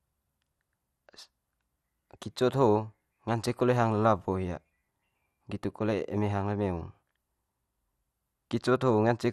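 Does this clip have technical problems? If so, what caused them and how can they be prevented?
Yes. Throughout, the speech sounds dull and gurgling with granular distortion, most likely from MP2 compression at a rate consistent with 80 kbps, dropping upper sub-bands and coarsely quantising the rest. To prevent it, encode at a higher bitrate or use a more efficient codec.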